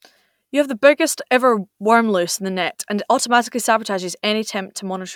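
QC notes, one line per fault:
No audible faults found in this speech recording.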